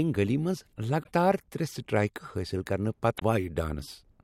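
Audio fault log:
1.02–1.08 s and 3.16–3.22 s, damaged data in a compressed stream: two bursts of about 60 ms each where the speech briefly breaks into a chirp, squawk, click or short hole. Corrupted bytes there make the decoder misread its frames, lose sync and hunt for the next valid frame header. On a spectrogram each appears as a short smeared block of broadband or oddly patterned energy breaking the harmonic bands; the waveform shows an abrupt, irregular segment with discontinuous edges.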